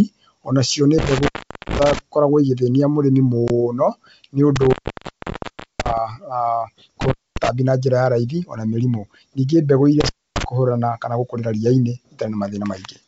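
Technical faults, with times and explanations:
0.98–1.99 s, 4.56–5.98 s, 7.01–7.49 s and 10.00–10.44 s: intermittent contact. The speech drops out four times, with the line open for about 410 ms, 1.06 s, 230 ms and 270 ms. Each dropout is bracketed by crackle as the loose joint makes and breaks. While the circuit is open, the signal falls to faint hiss because only the noise floor of the following stages reaches the output.
3.48–3.51 s: packet loss on an ADPCM call. About one packet's worth of audio, 20 ms, goes missing and is filled with silence, leaving a hard-edged gap in the speech. ADPCM codes each sample as a difference from a prediction, with an adaptive step size. After the gap, the receiver's predictor and step size no longer match the sender's, so the speech resumes slightly distorted before it settles.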